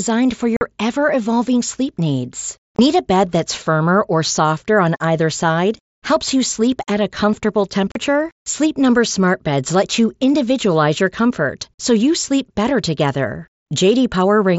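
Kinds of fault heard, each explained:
Unconcealed Bluetooth headset packet loss: audio between headset and phone went missing in short bursts and was replaced by silence or an idle pattern. This left hard-edged holes at 0.57 s before "ever evolving sleep needs", at 2.76 s before "a bed that's firmer", and at 7.92 s after "sleep at a comfortable", lasting 45, 22.5 and 37.5 ms. The lengths fit whole mSBC frames dropping out. Unlike concealed loss, nothing smooths over the gaps.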